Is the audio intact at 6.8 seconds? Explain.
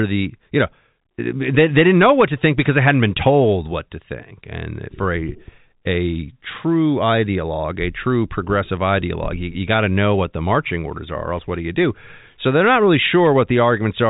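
Yes, the audio is intact at 6.8 seconds, with nothing there beyond the steady telephone-band sound of G.711 coding, which holds the speech below about 3.8 kHz.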